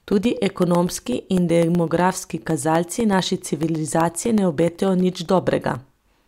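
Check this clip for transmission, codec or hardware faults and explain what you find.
Periodic USB or driver dropouts run from 0.12 to 6.13 s, every 0.125 s. Something regularly stalls the audio path, and each stall loses around a millisecond of the speech, filled with silence. About fifty evenly spaced ticks result, heard wherever speech is present.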